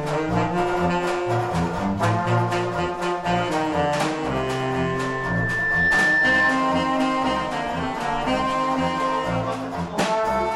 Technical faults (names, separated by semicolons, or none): loudspeaker feedback squeal